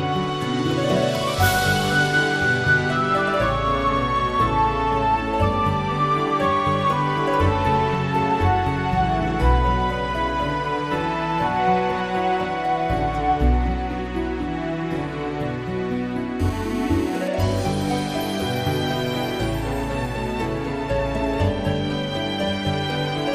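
At 16.40 s a hard, raspy buzz cuts in and holds until 17.28 s. That's GSM phone buzz: a 2G handset close by, sitting in a call, is firing off radio bursts about 217 times a second, and something in the audio path rectifies them into sound. You get a steady 217 Hz tone stacked with harmonics, about 16 dB under the programme, with no relation to anything else in the audio.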